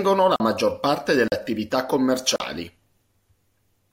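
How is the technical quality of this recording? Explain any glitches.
The recording is marred by three dropouts in the speech. Block of digital silence at 0.36 to 0.40 s (just before "maggior parte"), 1.28 to 1.32 s (just after "la maggior parte") and 2.36 to 2.40 s. In each, the sound drops to silence for 40 ms with no fade, so it is heard as a short hole.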